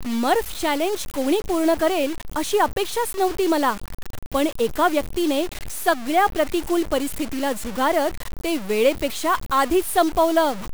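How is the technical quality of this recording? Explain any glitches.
The quality is poor: grainy, gritty distortion runs through the whole recording. It sounds like low bit depth without dither, most likely from the speech being truncated to very few steps, something like 5 bits, with no dither added. The rounding error follows the speech itself, sitting only about 15 dB below it, so you hear a rough, buzzy texture that shifts with the speech. It gets worst in the quieter stretches, where the sound sputters or drops out between steps.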